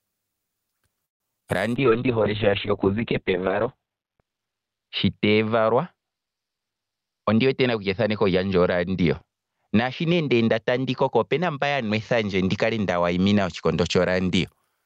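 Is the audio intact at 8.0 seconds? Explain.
No. Three faults overlap at 8.0 seconds.

A call bitrate drop runs from 1.78 to 14.53 s. The encoder was starved of bits, so the sound turns rough and muffled, with nothing above 4 kHz where it once reached 20 kHz. That fits a fall from about 32 to 6 kbps. Unlike plain low-pass filtering, the coarse coding also adds a watery, grainy texture.

A jitter buffer speed-up spans 6.90 to 8.39 s. The receiver trims pitch-period slices, about 150 ms in total, to reduce a backlog. Timing runs about 8% fast while pitch stays unchanged, which distinguishes it from a resampling or pitch shift.

Gain pumping is heard throughout the clip. The gain swings by roughly 15 dB, squashing loud and soft parts closer in level, likely from excessive gain feeding a fast limiter. Unlike a noise gate, it raises the noise rather than cutting it.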